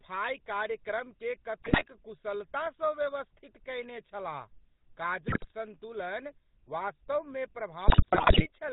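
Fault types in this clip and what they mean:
GSM full-rate codec: Throughout, speech is cut off above 4 kHz with a buzzy, gravelly roughness, consistent with 13 kbps pulse-excited vocal-tract coding.
GSM bit errors: Corrupted filter, pitch and gain parameters produce squawks, pops and gargling in three bursts, from 1.64 to 1.84 s, 5.28 to 5.52 s, and 7.88 to 8.48 s.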